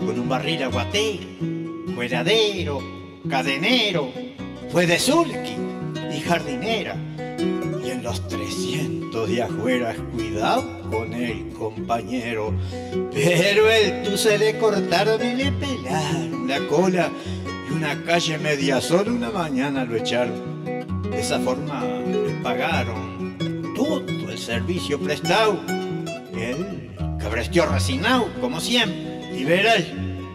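The whole clip has channel delay (comb filtering): one side arrives roughly 10 ms late, so when the two are folded to mono the shared content cancels at evenly spaced frequencies, starting somewhere around 40 Hz, which leaves the sound hollow and phasey throughout.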